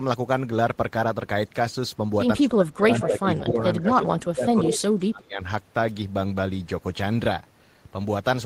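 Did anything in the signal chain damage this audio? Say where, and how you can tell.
Yes. In call processing, the speech sinks by up to about 20 dB from 2.37 to 3.57 s and by up to about 25 dB from 3.8 to 5.41 s, in broken dips. This is likely speech suppressed in double talk: with both ends active, the echo canceller attenuated the near talker along with the echo.

Echo leak, also in call processing: a delayed copy of the speech, 155 ms behind the original, surfaces at 3.02–3.2 s, 3.36–3.62 s and 4.69–4.8 s. The first and last are nearly as loud as the speech, the middle one much quieter. The far end's canceller likely left loudspeaker pickup unremoved.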